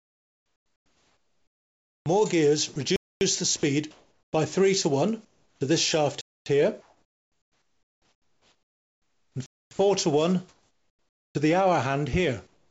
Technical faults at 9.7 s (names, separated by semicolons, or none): sound chopped by the voice detector; gap between chunks